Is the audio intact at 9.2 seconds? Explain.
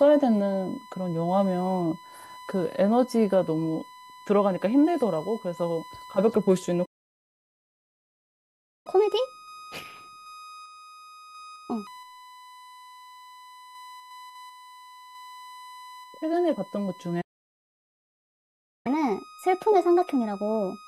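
No. At 9.2 s the speech is inside a catch-up at higher speed running from 8.87 s to 11.87 s. After a stall, the player works through its backlog by resampling at 1.25 times normal rate, so the speech is faster and its pitch is raised by roughly four semitones until it returns to normal speed. Underneath, a steady USB whine at 1 kHz is present there as well, sitting roughly 20 dB below the speech. It comes from the USB bus's 1 ms frame current leaking in through power or ground.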